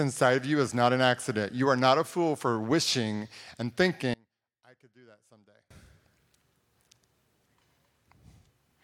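Speech, with one channel inverted from 4.14 to 5.71 s after "fool for wishing and". The likely cause is reversed polarity on one side, so the centred voice cancels in mono and drops about 30 dB to a thin residue. The waveform shrinks nearly flat there, and the spectrogram fades almost blank.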